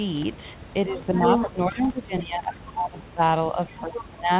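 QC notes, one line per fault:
0.86–3.21 s, speech suppressed in double talk: the talker dips, at worst by roughly 20 dB, likely the echo canceller ducking both sides while they overlap.
1.02–1.5 s, other side's voice leaking through: a second voice comes in at about the talker's own level, likely loudspeaker echo the canceller failed to remove.
3.52–4.31 s, speech suppressed in double talk: the talker is pulled down again, by roughly 25 dB at the deepest, with the same likely suppression during overlap.
3.67–4.03 s, other side's voice leaking through: a quieter residual voice, around 10 dB under the talker, likely uncancelled echo from the far end.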